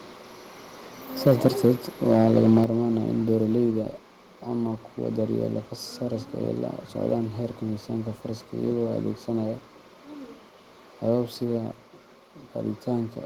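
From 1.26 to 1.72 s, and again from 2.10 to 2.64 s, the loudest speech peaks break into a harsh, crackling edge. This is microphone overload. The input was most likely set too hot, so peaks ran about 6 dB and then about 3 dB past the converter's ceiling, and a few percent of samples were cut flat. On a waveform the peaks look squared off, and a spectrogram shows vertical smears of broadband energy at each clipped syllable.

Right at 2.64 s, as the second overload ends, the whole level drops about 6 dB in one step. A further drop of about 2 dB follows at 3.66 s. Both are the microphone volume stepped down, most likely by the call software lowering the device's input gain after the clipping. Speech and background fall together with no fade, so the waveform envelope shows a sharp stair-step down. On a spectrogram the whole band abruptly dims at each point.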